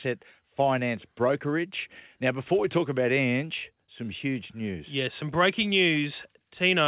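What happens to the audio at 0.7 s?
At 0.7 s the speech comes through intact, with no dropout, glitch or other fault, only the steady narrowband sound of the call path with nothing above 4 kHz.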